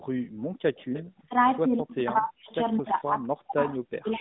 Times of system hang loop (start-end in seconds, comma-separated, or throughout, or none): none